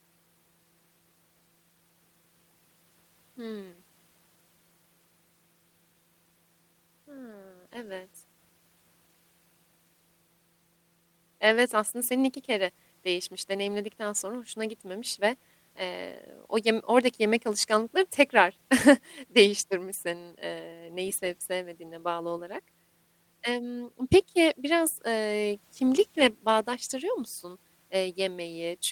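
Nothing stood out as a technical fault on listening to the speech recording.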